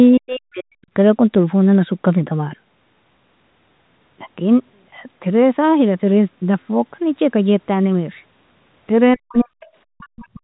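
From 0.09 to 0.9 s the speech sinks by roughly 40 dB, nearly to silence, over about 0.7 s. The same speech suppressed in double talk returns at 9.16–9.56 s and again from 9.95 s to the end. The likely cause is an echo canceller that couldn't separate the talker from the far-end voice arriving at the same moment, so it turned everything down.

Brief scraps of the other side's voice leaking through appear at 9.61–9.66 s and 10.23–10.27 s. They sit far under the talker, around 30 to 35 dB down, and are likely loudspeaker echo that the canceller left in the microphone signal. These bursts are a distinct second voice. Room reverberation would instead be a smeared tail of the talker's own sound.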